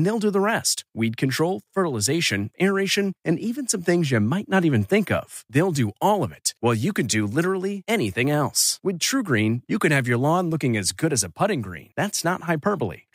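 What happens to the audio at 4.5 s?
Nothing goes wrong at 4.5 s; the speech runs through that moment intact, with no dropout, click, distortion or other fault to be heard.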